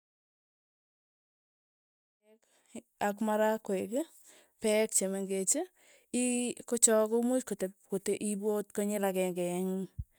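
No technical faults can be heard in this speech.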